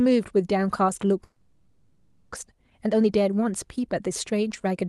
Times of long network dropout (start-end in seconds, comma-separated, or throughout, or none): 1.23-2.38